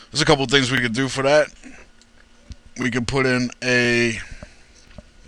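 Overlapping chunks cause a brief stutter at 0.78–0.80 s, 1.80–1.83 s, 2.83–2.85 s, 3.85–3.88 s and 4.88–4.90 s, a regular tick about once per second through the audio. Each join replays roughly 25 ms of sound because every 1-second chunk begins slightly before the previous one finished, so the tail of one block is heard again at the head of the next, making the sound catch and repeat.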